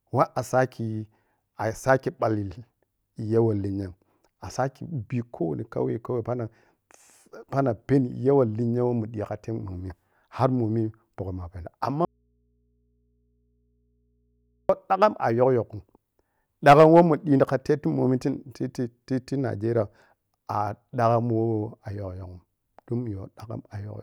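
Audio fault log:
12.05–14.69 s, audio dropout to a faint residue: the signal was likely lost while the path stayed live, so after "momi pukkham muna peno" speech cuts abruptly to faint hum until "dagham a".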